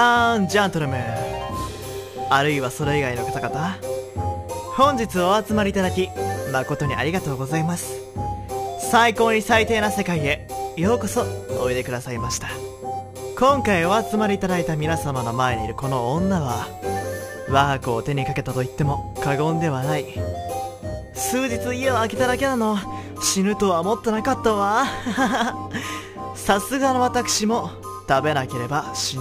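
Throughout, crude rate conversion, consistent with 48 kHz to 44.1 kHz by dropping samples unfiltered, leaves error roughly 25 dB down, a gritty inharmonic fizz trailing loud, bright sounds.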